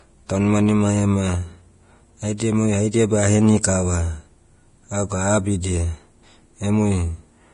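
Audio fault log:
throughout, Vorbis compression: speech sounds hissy and grainy with nothing above 10.6 kHz, likely heavy low-bitrate coding turning treble detail into matched-energy noise, unlike plain low-pass muffling.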